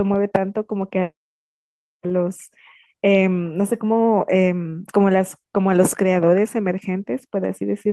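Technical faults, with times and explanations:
No technical faults detected.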